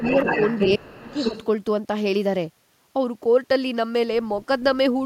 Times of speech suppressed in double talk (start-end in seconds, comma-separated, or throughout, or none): 0.76-1.15